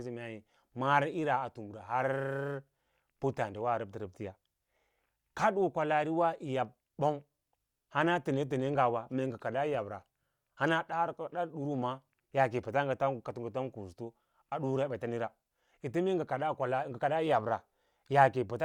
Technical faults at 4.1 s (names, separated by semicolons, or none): none